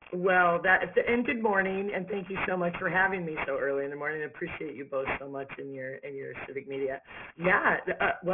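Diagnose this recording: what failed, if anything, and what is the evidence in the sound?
Aliasing runs throughout the clip, introduced at the sample-rate conversion stage. Content above about 3 kHz folds back below it as gritty, metallic tones unrelated to the source, fairly strong at roughly 10 dB below the signal. This points to downsampling to about 6 kHz without an anti-alias filter.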